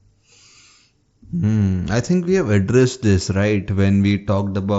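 Nothing technically wrong can be heard in this speech clip. It has the sound of a Bluetooth mSBC headset link, with the band reaching up to 8 kHz and light codec grain on the louder passages.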